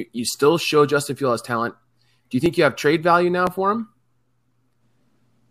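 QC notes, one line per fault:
2.46 s and 3.47 s, dropped samples: two single sharp clicks, the first just before "you have trade value" and the second between "have trade value now" and "for him". Each is a thin vertical line across the spectrum. The likely cause is a loss of about 0.7 ms of samples, so the waveform jumps straight to a later value. That step produces a broadband tick, and the gap is too brief to remove any audible sound.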